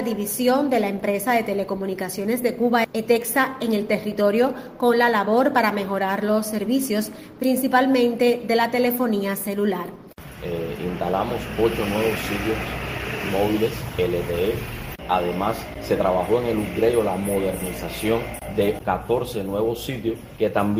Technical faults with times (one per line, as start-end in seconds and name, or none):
none